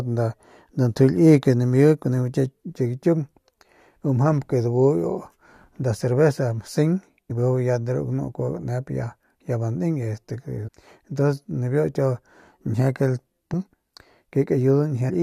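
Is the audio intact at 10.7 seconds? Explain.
No. From 10.67 to 10.69 s the speech breaks into a brief glitch. This is damaged data in a compressed stream: corrupted bytes there made the decoder misread those frames and lose sync until it locked onto the next valid frame header.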